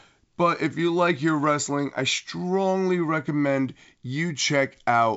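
No technical faults turn up in this speech, which comes through G.722 wideband telephone coding at 64 kbit/s with nothing above about 7.7 kHz.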